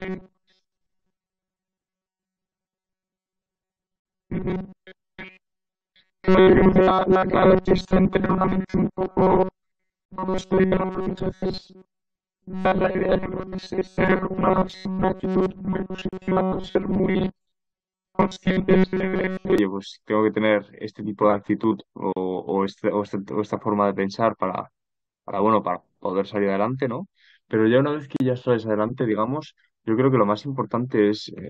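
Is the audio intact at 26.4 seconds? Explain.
Yes, at 26.4 seconds the speech is intact, with no dropout, click, distortion or other fault at that point.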